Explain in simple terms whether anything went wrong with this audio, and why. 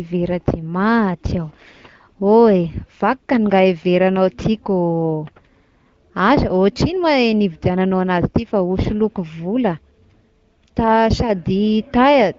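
Nothing went wrong that I could hear: listening to this speech recording, nothing stood out as a problem.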